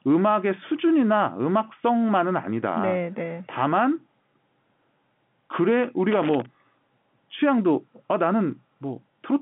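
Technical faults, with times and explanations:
6.11–6.46 s, loose connector crackle: an irregular burst of scratching and crackle, as a worn or dirty contact makes and breaks and chops the signal. Unlike codec glitches or clean digital dropouts, the bursts are uneven and gritty, lying over the narrow telephone-band speech.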